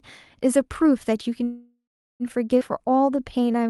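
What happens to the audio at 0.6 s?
Nothing goes wrong at 0.6 s: the speech passes through intact, carried normally by the WebRTC call path.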